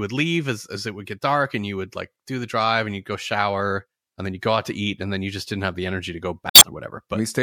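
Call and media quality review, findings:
Damaged data in compressed stream, 6.49–6.63 s, right after "the energy to go": brief chirp, squawk, click or short hole. Decoder misreads corrupted frames, loses sync, resumes at next header. Garbled burst, not smooth fill, distinguishes it from packet-loss concealment.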